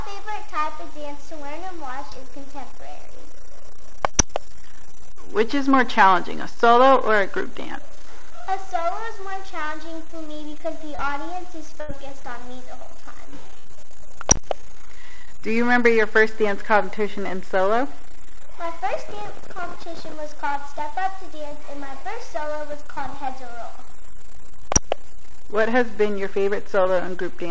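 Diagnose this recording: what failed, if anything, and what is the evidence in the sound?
Network-side short concealed packet loss, twice: 2.10 to 2.13 s and 26.83 to 26.87 s. Each is a tiny smear where about 20 ms never arrived in time and the receiver papered over it by stretching the preceding sound before blending back into the real audio.

Scattered short gaps, also network and jitter-buffer territory, show up in two clusters. From 10.95 to 13.69 s there are about four hiccups, the longest around 70 ms. From 21.49 to 23.13 s there are about three, the longest only about 20 ms. Every hole gets patched by continuing the last sound, so you hear ticks and brief wobbles. The audio stops at 8 kHz, which fits a G.722 call path.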